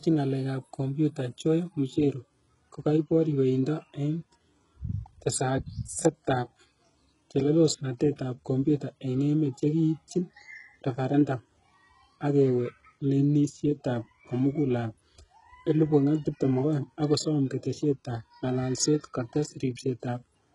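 From start to finish, the speech carries heavy HE-AAC compression damage, most likely from that codec at a very low rate; the degradation fits a bitrate around 12 kbps. Nothing survives above 11.1 kHz, and the treble below that is rebuilt from copied lower bands rather than coded. Unlike a plain low-pass or ordinary lossy smearing, the s sounds come out gritty, metallic and lispy, with upper harmonics that don't line up with the body of the sound.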